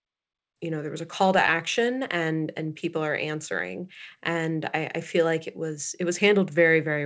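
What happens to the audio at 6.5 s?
At 6.5 s the speech carries on intact, with no dropout, glitch or distortion, only the ordinary band limit of a wideband call codec, which leaves nothing above about 8 kHz.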